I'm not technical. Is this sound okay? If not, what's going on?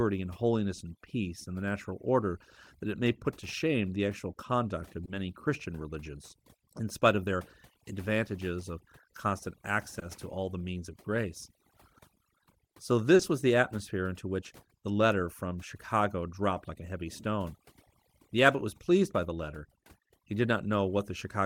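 No. Two problems can be heard.

The first is overdone noise removal, present the whole way through. A cleanup tool was set too strong. It silenced background hiss but took soft parts of the speech with it. The background drops away and breaks up into twinkling specks.

The second is short concealed packet loss, at 5.05 to 5.09 s, 9.99 to 10.03 s and 13.15 to 13.21 s. Tiny pieces of the call arrived too late: 20 ms twice, then 40 ms. The receiver patched each gap by stretching the sound just before it. Each one comes through as a quick smear or wobble.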